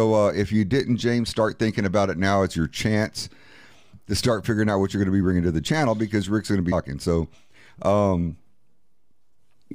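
A speech recording with damaged data in a compressed stream at 6.71 s: a brief glitch where the decoder misreads corrupted frames and loses sync before locking onto the next valid header. A spectrogram shows a thin broadband vertical streak, and the waveform shows an abrupt discontinuity.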